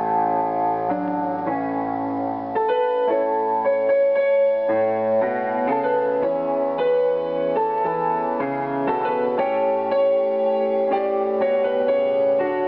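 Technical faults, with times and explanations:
Nothing technical goes wrong anywhere in this one, so there's nothing to flag.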